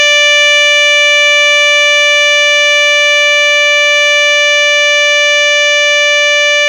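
Nothing technically wrong turns up in this music clip; it just runs along as you'd hope, with no faults to point to at any moment.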